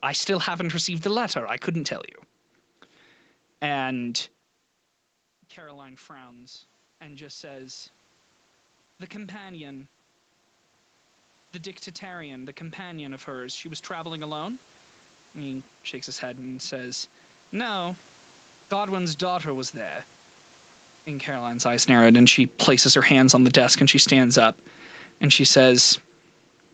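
From 5.54 to 7.93 s the speech and the room noise behind it swell together by about 5 dB. This is automatic gain rising. Shortly after 4 s the talker moves away from the microphone and the input drops by about 21 dB. The gain control responds by slowly raising its gain, so the level creeps back up rather than jumping. A second, longer rise runs from 11.52 to 21.41 s, adding about 12 dB. Across those ten seconds both the voice and the background noise grow steadily louder.

From 21.73 to 26.15 s the opposite happens. The voice arrives loud and then sinks by about 9 dB, taking the background noise down with it. This is automatic gain falling. Around 21.5 s the talker comes back close to the microphone while the gain is still set high from the previous rise. The control then lowers its gain gradually, so the excess loudness fades out over several seconds instead of being corrected at once.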